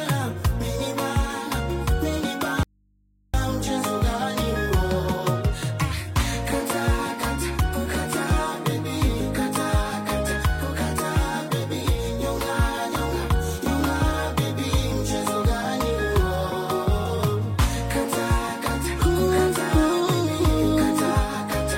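At 2.63 s the sound cuts out abruptly. This audio dropout to a faint residue lasts 0.71 s, until 3.34 s. Only a low mains hum fills the gap, roughly 40 dB below the signal. The likely cause is a lost feed into a still-live input.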